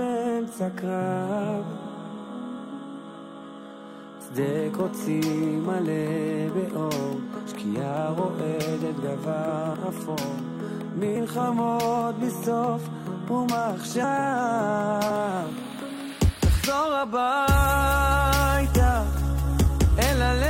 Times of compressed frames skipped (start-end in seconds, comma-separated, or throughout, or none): 9.73, 11.15, 14.03, 15.09